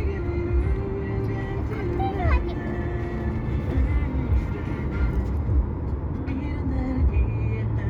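Nothing here trips any alarms: there's no fault to point to anywhere in this recording of sounds.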